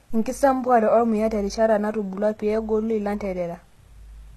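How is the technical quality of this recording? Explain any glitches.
Technical quality is compromised by HE-AAC compression damage that runs through the whole speech clip. It is plainly audible from start to finish. The treble sounds bright but synthetic, and nothing is present above 12.3 kHz. The likely cause is HE-AAC coding at a low bitrate, which fits something around 16 kbps. The codec keeps only the lower spectrum and rebuilds the upper bands by copying lower content upward under a coarse envelope, so harmonics fail to line up across the crossover. That leaves s sounds gritty, metallic or lispy. A plain low-pass filter would sound dull instead. This treble is present but false.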